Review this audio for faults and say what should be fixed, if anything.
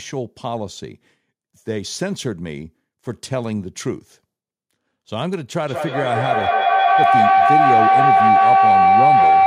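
A feedback howl starts at 5.65 s and runs to the end of the clip. Two devices in the same room are on the call, so the loudspeaker's output re-enters the microphone with more gain on each pass. The loop favours a band around 700 Hz, which narrows into a tone, with the loop repeating roughly every fifth of a second, and rises to about 10 dB above the speech. To prevent it, mute or leave the call on one device, or use headphones.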